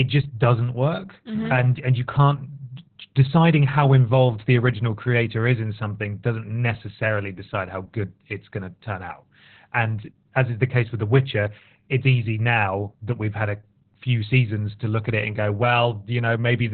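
Speech clip with heavy Opus voice compression throughout. Nothing survives above about 4.2 kHz, so it sounds muffled, and the coarse coding leaves it hoarse and slightly robotic. That fits narrowband SILK near 8 kbps.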